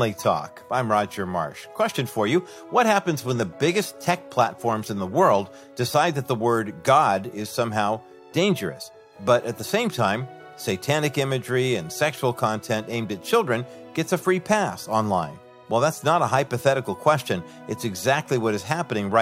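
From 0.0 to 6.0 s the audio shows an adaptive stream starting at a low bitrate. The player opened on a cheap rendition to start quickly, and the thin, smeared treble and stronger codec artefacts point to something like HE-AAC at 32 kbit/s, with the highs synthesised rather than coded. At 6.0 s it switches without a gap to a fuller rendition consistent with AAC-LC at 96 kbit/s. Nothing above 16.3 kHz is present.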